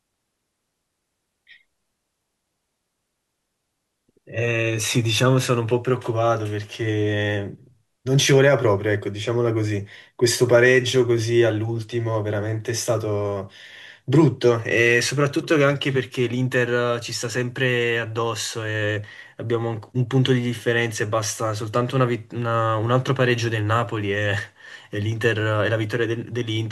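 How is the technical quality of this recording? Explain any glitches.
Listening to the speech recording, nothing stood out as a technical problem, and there are no glitches to explain.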